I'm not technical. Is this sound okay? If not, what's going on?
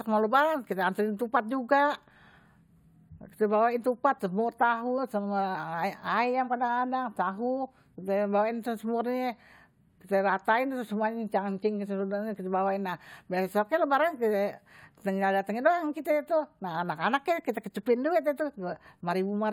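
Yes, this speech recording sounds fine. Nothing goes wrong with the sound at any point, so there is nothing here that needs fixing.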